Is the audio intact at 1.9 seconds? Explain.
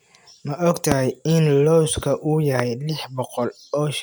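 Yes, the speech at 1.9 seconds is intact, with no audible fault at that moment.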